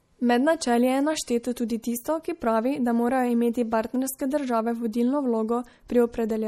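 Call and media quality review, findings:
Speech, throughout: low-bitrate audio saved at a high bitrate. First-pass codec artefacts persist despite the large file. The spectrogram shows a flat ceiling at 17.8 kHz, empty above. This is likely an MP3 at around 48 kbit/s re-encoded at 256 kbit/s, which cannot restore the discarded content.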